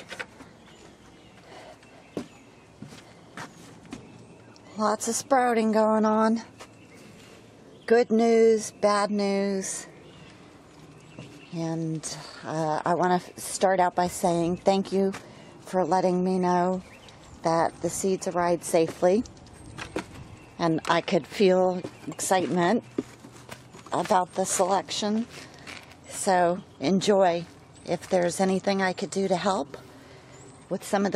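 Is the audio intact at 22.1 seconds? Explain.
No. From 22.12 to 22.14 s there is damaged data in the compressed stream: the decoder misreads or rejects corrupted frames and resyncs, producing a brief chirp, squawk, click or gap.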